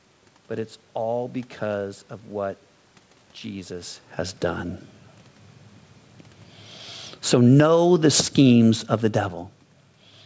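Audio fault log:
7.18–9.65 s, automatic gain falling: the speech and its room background sink together, ending about 6 dB quieter across roughly two and a half seconds. The automatic gain control judged the input too loud and eased its gain down gradually rather than at once.
7.66–8.76 s, automatic gain rising: in the middle of that decline, speech and background swell together by about 4 dB over about a second. Here the automatic gain control judged the input too quiet and briefly pushed its gain back up.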